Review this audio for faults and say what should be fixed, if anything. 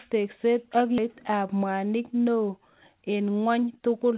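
There's a skip ahead at 0.98 s: roughly 0.7 s of speech is dropped and playback jumps straight into "ap mwanik" with no fill, likely from a jitter buffer overflow.

From 2.75 to 4.13 s, a jitter buffer speed-up trims short pitch-period chunks so the speech runs about 111% fast at unchanged pitch, roughly 0.15 s gone.

The G.711-style narrowband sound, with nothing above 4 kHz, comes from the call path itself. To prevent both faults, give the jitter buffer more headroom and smooth out packet delivery so late bursts don't force drops or catch-up.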